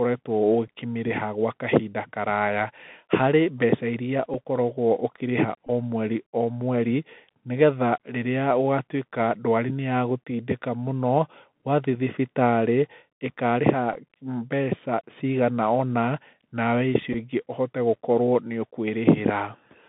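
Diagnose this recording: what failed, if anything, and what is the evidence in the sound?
Codec stage: the Bluetooth CVSD headset codec runs throughout. It is a one-bit delta coder stepping at 64 kHz, so the spectrogram shows a hard ceiling near 3.6 kHz and a floor near 150 Hz, with nothing above 4 kHz. S sounds turn scratchy where loud highs outrun the adaptive step, and a granular hiss fills the background.

Wireless link stage: the Bluetooth headset packet repeated at 0.68, 4.34, 5.67 just before "o mweri o mweri", 13.94, and 17.13 right after "nawe icio". Lost voice packets were replaced by the previous packet's bits decoded again, so each event is a short tick or buzz. On the waveform it appears as identical 3.75 ms cycles. The 18.8 ms run at 5.67 fits five repeats and briefly buzzes near 267 Hz.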